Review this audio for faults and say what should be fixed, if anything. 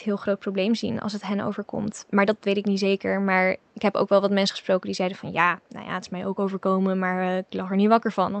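Faint repeats trail the speech by 170 ms at 1.95 to 2.04 s and 3.58 to 3.74 s. This is echo leak, likely residue that a loudspeaker-side echo canceller failed to remove. To prevent it, have that side use a headset or give its echo canceller a correct delay estimate and stronger residual suppression.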